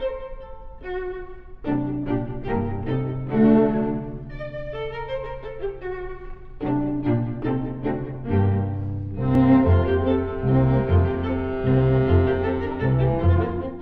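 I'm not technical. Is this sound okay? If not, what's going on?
No, there is one small fault. At about 9.35 s you hear a brief click. This is a repeated buffer. The playback system handles sound in tiny pieces. One piece did not arrive in time, so the system played the previous piece a second time. That piece is very short, about 1.3 ms, which fits a 64-sample buffer. A repeat that brief sounds like a click, not a stutter. Essentially nothing was lost.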